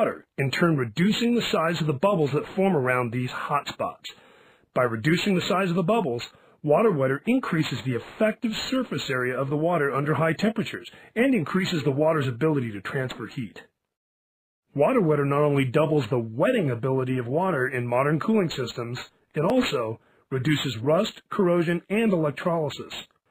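At 9.51 s and 19.50 s the sound skips. A few milliseconds vanish, and the two sides butt together. This is likely audio missing between chunks, with the audio handled in 5-second blocks.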